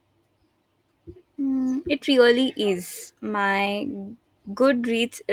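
At 3.07 to 3.09 s, just after "it really", a lost packet was rebuilt from error correction. No gap. The 20 ms patch sounds briefly rougher and noisier.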